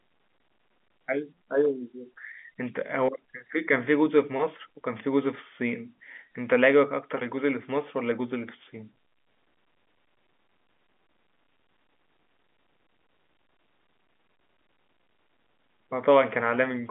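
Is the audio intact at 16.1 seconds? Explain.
Yes, the audio is intact at 16.1 seconds, with nothing interrupting or damaging the sound at that point.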